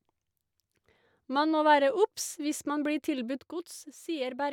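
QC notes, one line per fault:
3.39 to 4.52 s, one channel drops out: right at the tail, from 3.39 s to the very end, the speech suddenly sags by about 6 dB and stays down. It's a clean step, not a fade, so it doesn't sound like the talker backing off. The likely cause is one side of a stereo feed going dead, so once the two are summed to mono only half the shared signal is left, and anything carried only on the missing side vanishes with it.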